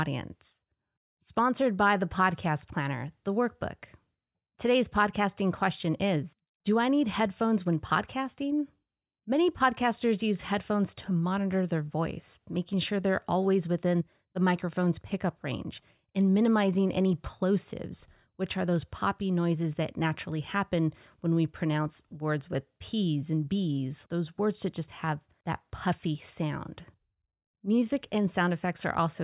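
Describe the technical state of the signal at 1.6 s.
At 1.6 s the speech signal is intact, with no audible fault at that moment.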